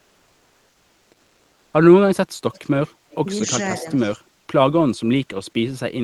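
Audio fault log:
0.00–1.73 s, comfort noise in place of the background: the real background gives way to steady, featureless hiss about 2 dB quieter, likely discontinuous transmission, pointing to Opus DTX, unlike ordinary noise, which fluctuates.
2.53–2.69 s, 2.87–2.93 s, 3.10–3.16 s, 3.97–4.11 s, echo leak: faint scraps of speech return 224 ms late, roughly 25 to 35 dB down, likely residual loudspeaker echo, distinct from reverberation by its fixed delay.
3.81–3.86 s and 4.17–4.22 s, speech suppressed in double talk: the talker briefly dips, slightly then deeply, in 50 ms pieces, likely the echo canceller ducking both sides during overlap rather than a dropout.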